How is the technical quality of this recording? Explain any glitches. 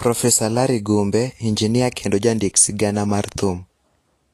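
Quality is compromised by audible codec damage. Vorbis compression is the likely cause, present throughout. Nothing reaches above 14.2 kHz. Treble detail turns grainy and hissy, which fits a low bitrate near 37 kbps.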